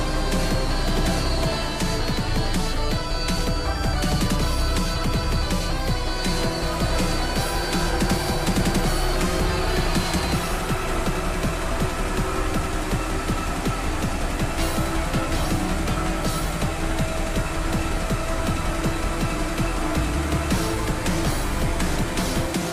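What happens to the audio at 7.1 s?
Nothing goes wrong at 7.1 s; the audio plays through that moment intact, with no dropout, click or other disturbance.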